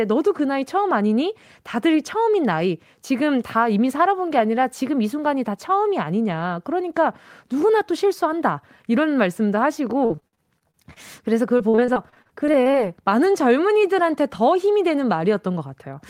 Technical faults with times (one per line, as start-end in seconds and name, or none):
10.05-10.98 repeated packet loss (robotic sound)
11.58-12.76 repeated packet loss (robotic sound)